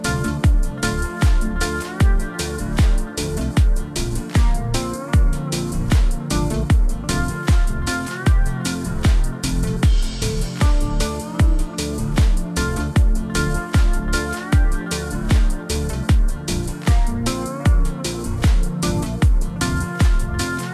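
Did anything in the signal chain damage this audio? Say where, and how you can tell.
Yes. From start to finish the audio sounds low and sluggish: everything is pitched down by about seven semitones and runs at two-thirds of its proper speed, with pitch and tempo shifted together by the same ratio. That lockstep change points to a wrong sample rate at the playback stage. The samples are being clocked out slower than they were captured, with no resampling, which fits material recorded at 48 kHz being played at 32 kHz.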